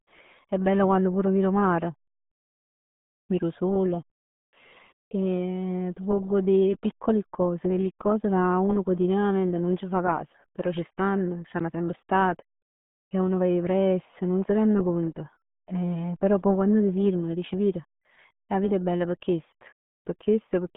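From start to finish, the speech carries the signature of the RealAudio 14.4 codec, the dial-up-era speech coder. The band is squeezed to roughly 150 Hz to 3.5 kHz, and nothing survives above 3.8 kHz, so sibilants and consonant edges are dulled. The coding damage is heavy, which fits a stream of around 8 kbit/s. The voice sounds muffled and gargly.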